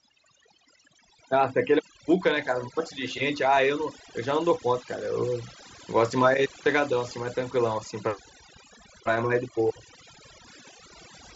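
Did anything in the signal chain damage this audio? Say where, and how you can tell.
Yes. The call-processing stage applied overdone noise removal across the whole recording. The background has been pushed far down, leaving small twinkling specks where isolated frequency bands briefly survive the gate. The speech loses some of its quieter detail, because the suppressor cut any band that fell near its noise estimate, including quieter components of the speech itself. This is excessive spectral subtraction rather than a fault in the wiring or converter.

On the wireless link, concealed Bluetooth headset packet loss appears at 3.55 s. The gap lasts about 15 ms, which points to a couple of lost frames. The receiver's concealment bridges the hole by repeating the best-matching recent stretch of waveform. The wideband mSBC headset codec carrying the link keeps speech bandwidth up to 8 kHz.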